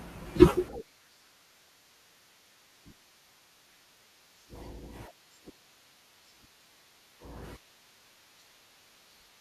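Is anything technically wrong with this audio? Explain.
Yes, there's damaged data in the compressed stream at 1.67 s and 6.50 s. The decoder misreads corrupted frames, loses sync and resyncs, leaving brief glitches in the speech.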